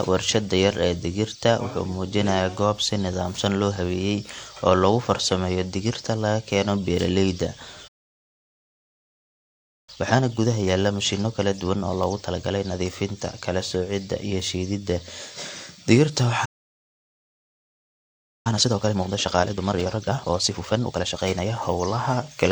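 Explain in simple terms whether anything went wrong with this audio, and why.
Transcoding between lossy codecs runs through the whole recording. It was likely compressed by one codec and then squeezed again by another, so the second pass spends effort on the first one's flaws and adds its own. Both sets of artefacts are heard together.

A playback stall hits at 7.87 s, right after "digirta laga keeno beeraleyda", and the speech falls silent for about 2 seconds until 9.89 s. A second stall runs from 16.45 s to 18.47 s. Each was likely caused by the player running out of data and simply stopping mid-flow.

Time-compressed catch-up follows each stall. From 9.89 s to 12.89 s, leading into "kala soocidda iyo shiididda", the player plays 1.15 times faster. From 18.47 s to 21.47 s, before "hawlaha kala duwan sida", it plays 1.5 times faster. Pitch stays normal, but the speech sounds hurried.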